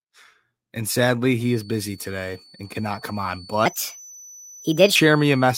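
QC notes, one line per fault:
1.36 to 5.58 s, feedback whistle: a thin, steady 4.5 kHz tone sits some 25 dB under the speech, swelling and fading slowly in level. The likely cause is a loudspeaker-to-microphone loop held just at the edge of feedback, so it rings without growing.
3.66 to 4.96 s, section at the wrong speed: this stretch runs 1.34 times too fast, so the speech turns hurried and rises about five semitones at once. It is likely a playback or edit clocked at the wrong rate, shifting speed and pitch together.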